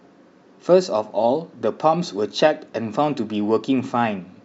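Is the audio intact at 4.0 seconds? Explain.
Yes, at 4.0 seconds the speech runs on with no dropout, click, distortion or other audible fault.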